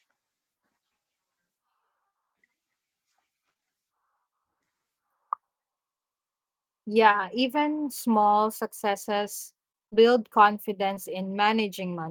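Speech here, with short concealed packet loss: three back-to-back hiccups around 3.53 to 3.64 s, then single ones at 7.12 and 10.94 s, where roughly 20 ms packets went missing and got patched into brief smears. Between 9.72 and 10.01 s, repeated packet loss leaves six gaps, with nearly half that stretch filled in, so it turns choppy and robotic.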